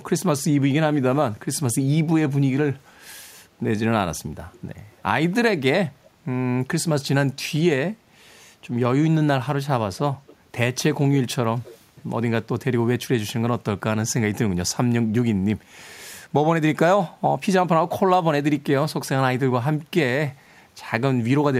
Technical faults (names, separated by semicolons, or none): echo leak